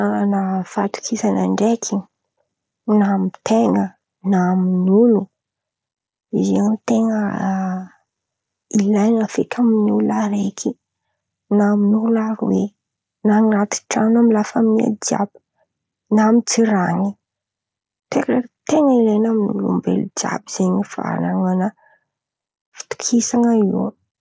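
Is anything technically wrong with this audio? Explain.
No, nothing here is technically wrong; it's ordinary speech that has come through a call's microphone processing and a Bluetooth headset link, so it stops at about 8 kHz, which is just how that path works.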